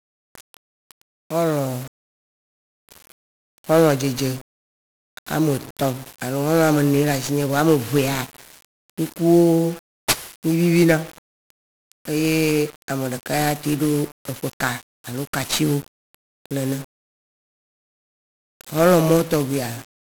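From start to finish the speech passes through 1-bit DFPWM compression. Each sample keeps only a single up-or-down bit driving an adaptive level, which fits a 48 kbps stream. The heavy quantisation noise leaves everything fuzzy and crackling, with the treble sunk under constant hiss.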